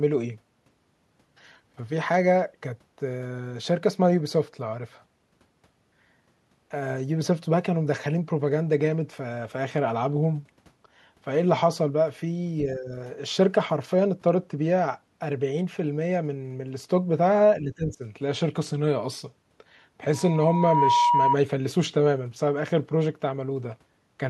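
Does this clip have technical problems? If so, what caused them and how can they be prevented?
Yes. From 12.66 to 12.92 s and from 17.61 to 18.03 s, the speech is pulled down, by about 10 dB in the first dip and about 15 dB in the second. This is likely speech suppressed in double talk: an echo canceller unable to tell its own talker from loudspeaker echo while both sides spoke, so it attenuated everything. Better double-talk detection, or a headset that removes the echo path, prevents this.

From 20.13 to 21.37 s, a loudspeaker feedback squeal occurs: the microphone picked up its own loudspeaker, and at 960 Hz the loop gain went above one. That tone swells over roughly 0.7 s to about 5 dB above the speech. Lowering loudspeaker gain, moving the microphone away from the speaker, or adding a feedback suppressor prevents it.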